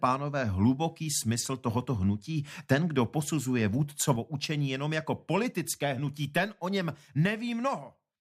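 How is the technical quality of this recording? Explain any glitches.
There is one clear glitch. At 4.16 s, a sudden gain jump drops the level by about 5 dB until the end. The sound and background noise fall together, likely from an unramped digital gain change.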